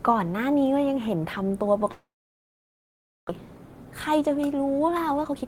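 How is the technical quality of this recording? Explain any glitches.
The speech is broken by two glitches.

From 1.91 to 3.31 s the sound trails off into a brief fading buzz, then about 1.2 s of silence, and resumes with roughly 0.86 s of speech missing. This is likely a long network dropout: packets stopped arriving, the receiver concealed the gap and then went quiet.

From 4.88 s to the end, the speech sounds hurried but keeps its pitch, running at 128% speed. This is a jitter buffer speed-up: with too much audio queued, the receiver repeatedly cut short pitch-period slices, trimming around 150 ms.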